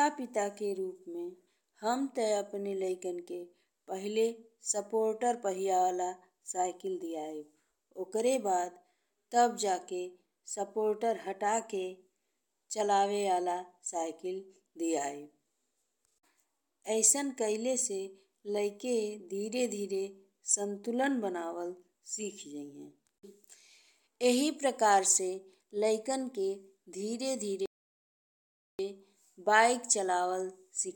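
At 27.66 s the speech halts in a rebuffering stall: playback exhausted its downloaded audio and waited, leaving about 1.13 s of silence until 28.79 s. The waveform goes flat and the spectrogram shows a blank gap, then the speech continues exactly where it stopped, with nothing missing.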